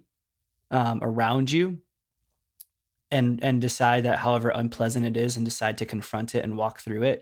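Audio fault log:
No audible faults found.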